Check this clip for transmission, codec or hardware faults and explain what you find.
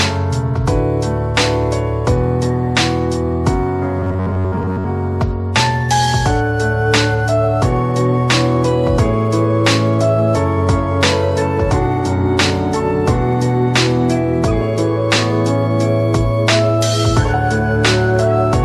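One fault is present: robotic sound from repeated short buffers, from 4.00 to 4.85 s. The sound becomes a rigid metallic buzz at about 94 Hz, most likely from roughly 10.7 ms buffers replayed repeatedly as audio arrives too seldom. Spectrograms show evenly spaced harmonic stripes, and waveforms show identical repeating cycles.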